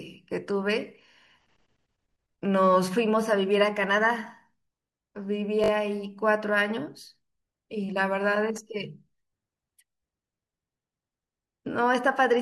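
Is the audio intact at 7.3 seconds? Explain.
Yes, the speech at 7.3 seconds is intact, with no dropout, click, distortion or other fault at that moment.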